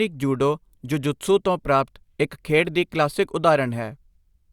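No technical faults can be heard anywhere in this speech recording. There is nothing in it that calls for a timestamp.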